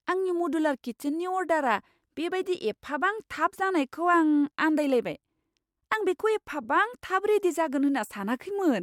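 Nothing stood out on listening to this speech recording.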